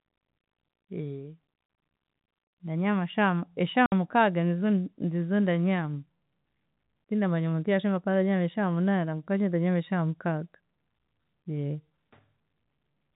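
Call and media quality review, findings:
Packet loss filled with silence, 3.86 to 3.92 s. Speech drops out for 60 ms, with hard edges. Receiver jitter buffer or network path. Lost packets replaced by digital silence; gap fits six 10 ms packets. G.711 telephone coding path: band-limited below 4 kHz.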